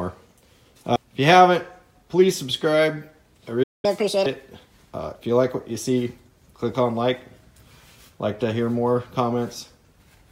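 At 3.63 s the player most likely ran out of buffered data or had its output thread blocked, and this is a playback stall. The output goes silent for about 0.2 s, until 3.85 s, cutting the sound off mid-flow rather than at a natural pause. When output resumes it picks up from where it stopped, so the silence is a gap in time, not a jump past any of the material.

From 3.85 s to 4.26 s the player works through the backlog the stall left behind by resampling it at 1.5 times normal speed, a catch-up at higher speed. Because resampling changes pitch along with tempo, that stretch sounds hurried and shifted upward by roughly seven semitones, giving a brief chipmunk-like lift. At 4.26 s the lost time has been recovered, and speed and pitch drop back together.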